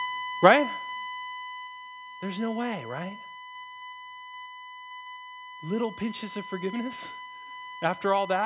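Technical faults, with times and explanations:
Throughout, USB whine: Current drawn by the USB bus in 1 ms frames is leaking into the audio through the power or ground wiring, so a steady tone sits at 1 kHz under the whole clip. Its level is roughly 10 dB below the speech, a fixed-pitch whine. It stays at 1 kHz because it follows the bus timing, not anything in the speech, and the narrowband call path, which removes everything above 4 kHz, leaves that pitch intact.
0.05 to 2.03 s, automatic gain falling: The automatic gain control judged the input too loud, or its background noise too strong for its starting gain, and pulled its gain down over about two seconds, by about 11 dB in total. The opening speech starts louder and then sinks steadily. Because the reduction applies to the whole input, the background sinks along with the speech, so the drop sounds like the entire recording receding rather than the talker moving away.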